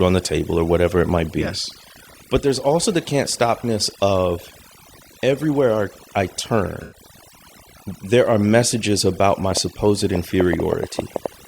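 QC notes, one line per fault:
Throughout: overdone noise removal. The noise reduction is working far too hard on this speech, pulling individual frequency bands down to nothing whenever they sit close to its noise estimate, and the quieter parts of the voice get taken along with the hiss. Pauses fall to near silence scattered with twinkling specks. On a spectrogram the background shows as isolated flickering dots on a dark field, and the upper and weaker harmonics look ragged and patchy.
6.83 to 6.97 s: corrupt frame concealed. Just after "everywhere I I" about 0.14 s is affected, roughly the span of four damaged codec frames. The decoder caught the corruption and covered it instead of playing garbage. On the waveform the envelope sags smoothly with no spike, and the spectrogram shows a short blurred or emptied band across all frequencies.
9.52 to 11.27 s: train of clicks. Starting after "are messages about my", around ten similar clicks land at an uneven pace, averaging close to 5.75 per second and peaking roughly 15 dB above the speech. 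They tick over the voice and through the gaps alike. The likely cause is interference from nearby equipment or a faulty connection or power supply. On the waveform they appear as thin vertical spikes at irregular spacing, and on the spectrogram as narrow full-height stripes.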